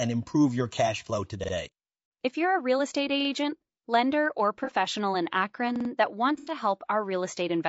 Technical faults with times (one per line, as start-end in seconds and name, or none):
0.00-7.69 low-delay AAC compression
1.44-1.53 repeated buffer
4.64-4.72 AAC frame loss with concealment
5.76-5.90 repeated buffer
6.38-6.52 AAC frame loss with concealment